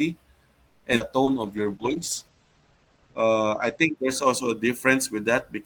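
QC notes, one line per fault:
0.67–0.87 s, call audio freeze: Packets were likely held back in transit, draining the jitter buffer, so the receiver stretched the last sound for about 170 ms. It is heard as a fading buzzy continuation rather than silence. When the audio resumes, it picks up exactly where it left off, so nothing is lost. The pause simply adds about 170 ms of delay to everything that follows.
0.96–1.03 s, skip ahead: Here a stretch of audio was dropped while later audio was already waiting, cutting the accumulated delay by roughly a tenth of a second. About 150 ms of sound is gone, bridged by only about 40 ms of filler. The two sides of the cut sit almost directly against each other, so the audio lurches forward abruptly instead of pausing.
1.24–1.30 s, short concealed packet loss: About 40 ms of audio never reached the decoder in time. The receiver patched the hole with about 30 ms of synthesised continuation, extending the preceding sound's character before crossfading back into real audio. 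The result is a brief smeared wobble, and a quick consonant in that spot can drop out entirely.
1.31–4.03 s, call bitrate drop: The bandwidth estimate collapsed, and the encoder was throttled from 32 to 12 kbps, staying at the floor for about 2.36 s. At that rate Opus quantises coarsely and narrows the audio band from 20 kHz to 8 kHz. Beginning around "also a", the sound turns muffled and watery, with the top end gone, until the bitrate climbs back.
1.41–3.08 s, jitter buffer slow-down: With its reserve running thin, the jitter buffer rebuilt margin by repeating individual pitch periods and fragments of pauses, inserting about 141 ms in total. Playback runs at roughly 92% speed without any change in pitch. Sounds are drawn out and sluggish, overlapping the low-bitrate stretch.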